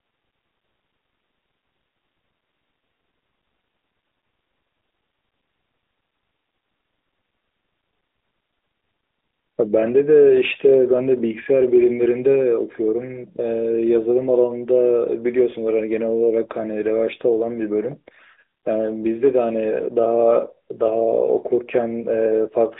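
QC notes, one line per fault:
Throughout: AMR narrowband mobile codec. Speech is confined to roughly 250 Hz to 3.7 kHz, with nothing above 3.8 kHz. The pulse-excited vocal-tract model leaves a plainly audible buzzy, synthetic edge, which fits a mid-rate mode near 10.2 kbps.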